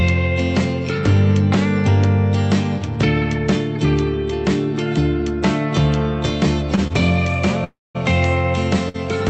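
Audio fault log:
6.75 s, 6.87 s and 8.89 s: short stall from a late packet. Each time the sound is held for about 21 ms, 27 ms and 55 ms with a slight buzz or dip, then resumes at the same point. Nothing is lost and there is no silence, which separates these from a freeze.
7.64 to 7.97 s: call audio freeze. The last sound turns into a fading buzz or hiss and then about 200 ms of silence, with 304 ms added in total, most likely from delayed packets emptying the jitter buffer. The audio then continues where it stopped. The long silent stretch marks this as a freeze rather than a brief stall.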